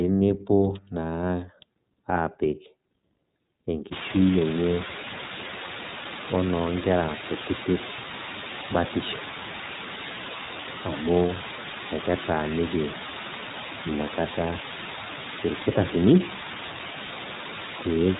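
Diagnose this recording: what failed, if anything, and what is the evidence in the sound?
The speech passed through an iLBC codec for its whole length. Nothing above 3.8 kHz survives, and every phrase has the plainly audible rough, synthetic edge of frame-by-frame excitation coding, which fits the 13.33 kbps mode with 30 ms frames, each coded independently.

From 3.92 s to the end, a sample-format conversion stage requantised the signal to very few bits, about 4, with dither added before rounding. The rounding error becomes a steady, even white hiss, nearly as loud as the speech, with no harsh distortion. This is low bit depth with dither.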